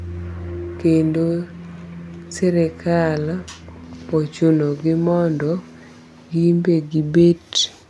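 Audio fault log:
No fault is heard in this speech clip.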